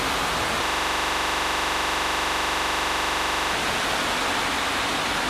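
From the start and running through the whole clip, a doubled audio track is audible: a full-band second copy trails the original by about 150 ms at roughly equal level, with no decay or room colour. This is likely a second, slower capture path. On a waveform, every transient appears as a matched pair.

From 0.66 s to 3.53 s, a system hang loop takes over. The machine froze while the sound hardware kept replaying one 42.67 ms slice, which fits a 2048-sample buffer. It repeats 67 times as a rough 23.4 Hz buzz. A spectrogram shows evenly spaced vertical stripes and a waveform shows identical repeating blocks.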